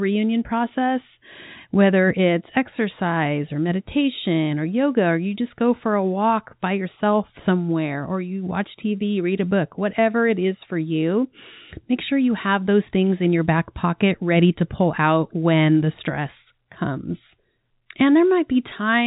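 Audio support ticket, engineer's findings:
No fault found; telephone-band audio, nothing to action.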